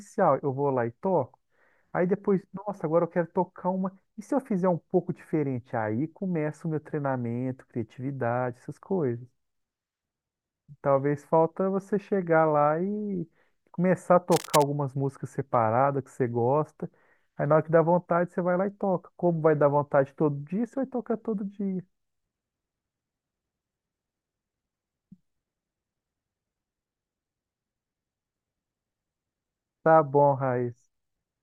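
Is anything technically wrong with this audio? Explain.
Yes. From 14.31 to 14.63 s there is cable scratch noise, likely from a worn cable or connector being moved so its contact resistance fluctuated rapidly. That adds a dense, uneven burst of scratchy rustling over the speech, roughly 10 dB below it.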